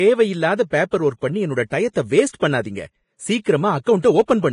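Vorbis compression damage runs throughout the speech, with nothing above 10.6 kHz and the treble that remains sounding hissy and grainy. The likely cause is heavy Vorbis encoding at a low setting, consistent with roughly 30 kbps. At that rate the encoder lowers its cut-off and quantises the upper residue so coarsely that fine detail is swapped for noise of similar energy. Consonants turn sandy and smeared, and voiced tones take on a rough texture.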